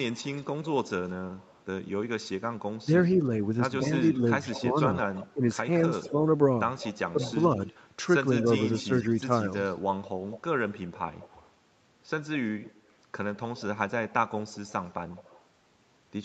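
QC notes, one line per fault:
0.12–1.89 s and 3.04–15.44 s, echo leak: a faint delayed copy of the speech trails the talker by 175 ms, then 187 ms, sitting roughly 20 to 25 dB below it. The likely cause is loudspeaker pickup at the far end slipping past its echo canceller.
2.83–2.89 s, 4.59–6.17 s and 7.12–7.58 s, speech suppressed in double talk: the talker's level drops by around 10 to 15 dB in short bursts while the other side speaks. This is likely the echo canceller mistaking the overlapping talk for echo and turning it down.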